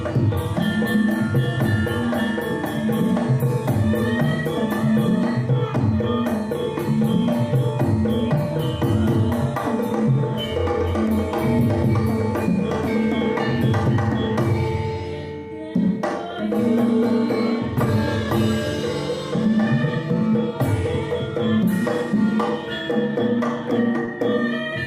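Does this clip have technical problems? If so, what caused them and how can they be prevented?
Yes. From 24.05 to 24.09 s there is short concealed packet loss. About 20 ms of audio failed to arrive in time, so the receiver extended the preceding sound across the gap and blended back, leaving a brief smear. A spectrogram shows a blurred, repeated slice, and the waveform shows a suspiciously regular segment. A larger jitter buffer or forward error correction on the link would prevent it.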